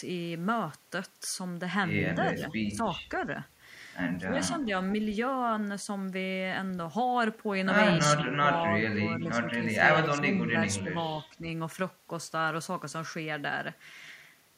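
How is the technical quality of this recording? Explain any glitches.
The speech is marred by speech suppressed in double talk at 2.15–2.99, 4.22–4.7, 8.15–8.81, 9.2–10.9 and 11.3–11.43 s. The voice dips by roughly 5 to 15 dB in patches, likely because an echo canceller mistook it for loudspeaker echo while both sides spoke. The waveform shows sudden envelope notches, and the spectrogram shows brief faded bands.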